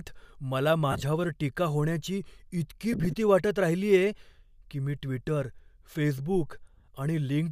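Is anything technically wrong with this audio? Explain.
Yes. Lost LE Audio frames cut into the speech three times: at 0.92 to 1.02 s (about 60 ms missing), 2.93 to 3.14 s (about 100 ms), and 6.74 to 6.88 s (about 100 ms). Each gap is broken up into short runs of a few tens of milliseconds. The decoder, likely LC3, repeats the last spectrum with scrambled phase, so the speech turns into a brief noisy smear. On a spectrogram this shows as blurred, structureless vertical bands in place of clear harmonics. The waveform shows matching patches of noise-like envelope.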